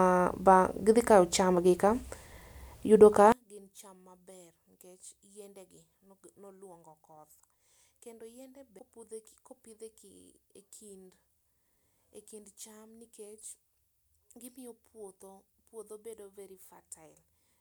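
From 3.32 s to the end, the speech drops by about 29 dB when heard in mono. The centred voice nearly disappears, leaving only a faint trace. This is most likely one channel inverted. If one side of the stereo pair has its polarity flipped, the two sides cancel when combined. Whatever they share is lost. Only the small difference between them survives, so the speech sounds faint.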